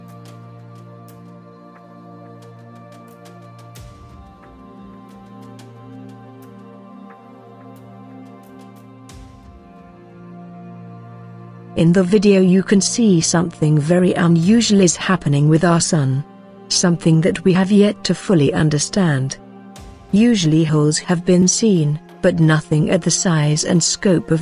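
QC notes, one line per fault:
No faults heard; nothing to flag.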